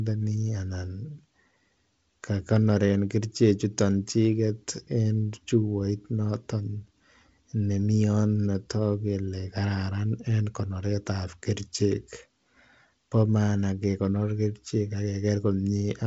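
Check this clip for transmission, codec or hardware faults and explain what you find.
Nothing stood out on listening to this speech recording as a transmission, codec or hardware problem.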